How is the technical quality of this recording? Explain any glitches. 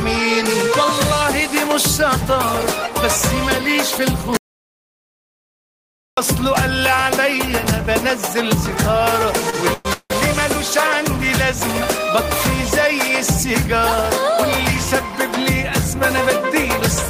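The recording has two clear glitches: one stretch of dead silence and one short burst of stuttering.

At 4.37 s the sound cuts off abruptly. It returns at 6.17 s. This is an audio dropout to silence. About 1.8 s of material is simply gone. The gap is silent, with no room tone at all. That points to the input being lost while the recorder kept writing silence. A disconnected device or a failed link is the likely cause.

From 9.35 to 10.12 s there are repeated stalls, heard as a stutter. Packets arrived late, and the playback buffer ran dry five times. Each time, the receiver stretched the last bit of sound to cover the wait. Those fills add up to 326 ms, and the longest gap was 171 ms. Nearly half of that span is filled-in sound. Nothing is actually lost, but the audio drags and catches.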